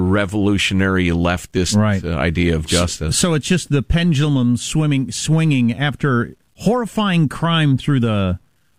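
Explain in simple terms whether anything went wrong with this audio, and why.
Yes, something went wrong: throughout the speech there is a grainy, gritty edge that rises and falls with the talking itself. This is low bit depth without dither. The likely cause is that the sound was stored with too few steps of loudness, roughly what 10 bits gives, and the in-between values were simply chopped off. Steady background hiss would stay the same between phrases. This roughness instead clings to the voice and sputters or disappears in the quietest moments.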